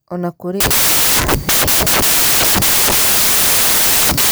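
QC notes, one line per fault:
0.60–4.31 s, samples built from the wrong bytes: right after "na kũrĩ" the speech gives way to loud, harsh broadband noise that runs to the end of the clip. The reader is assembling each sample from mismatched bytes, through a one-byte offset, swapped byte order or wrong alignment, so the rapidly fluctuating low-order bits land in the most significant position.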